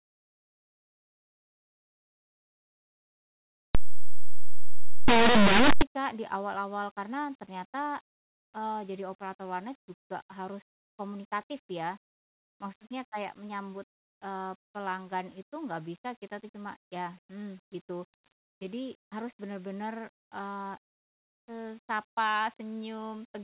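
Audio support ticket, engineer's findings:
3.75–5.82 s: abrupt, harsh, very loud distortion. Linear audio read as companded. Plain 8-bit samples were decoded as mu-law codes, so values just to one side of zero expand to maximum output. On the waveform, the section swings to very large values. On the spectrogram, it shows as a dense broadband smear up to the top of the band.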